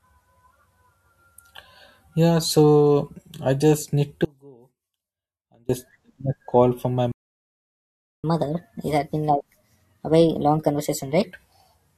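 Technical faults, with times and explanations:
4.25–5.69 s, audio dropout to a faint residue: the speech drops out abruptly for about 1.4 s. What's left in the gap is a faint trace of sound, roughly 30 dB under the normal level. The signal was likely lost upstream while the rest of the chain stayed live, so it isn't clean silence.
7.12–8.24 s, playback stall: the speech stops dead mid-flow for about 1.1 s and then picks up again. This was likely the player running short of data or getting its thread blocked, which leaves the output silent until it recovers.
8.24–11.24 s, catch-up at higher speed: right after the stall, the speech runs 1.25 times fast for 3 s, with pitch up about four semitones, then settles back to normal. That's the player resampling its backlog faster to win back the time lost in the stall.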